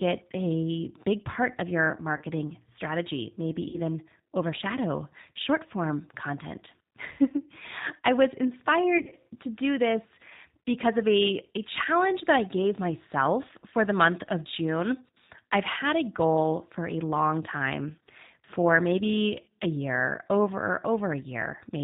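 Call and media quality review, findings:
G.729 codec, whole clip: speech band-limited to 4 kHz, rough, slightly synthetic texture at 8 kbit/s. Differs from a plain narrowband filter: the graininess comes from pulse-coded excitation, not band-limiting alone.

VoIP packet loss concealed by the speech codec: 2.17–2.24 s after "big part of your", 3.69–3.78 s before "overshadow short form content", 8.98–9.14 s before "to do this because". Gaps are filled with fading extrapolated buzz or coloured noise, not the silence or clicks of a raw dropout.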